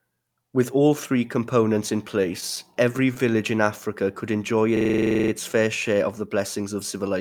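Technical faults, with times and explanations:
2.21 to 3.31 s, scattered short gaps. About seven small holes fall across this stretch of the speech, the longest around 15 ms. Each one is patched by stretching the sound that came just before it. Together the patches cover roughly 70 ms. The speech stays clear, but brief ticks and smears can be heard where the fill meets the real audio. The stretch also comes out about 9 ms late.
4.77 to 5.32 s, system hang loop. The playback froze while the sound hardware kept replaying its buffer. One 42.67 ms slice of audio repeats exactly, 13 times. That length fits a 2048-sample buffer. The repeats come at about 23.4 Hz. Little or no speech goes missing, since the loop holds the sound in place and then resumes.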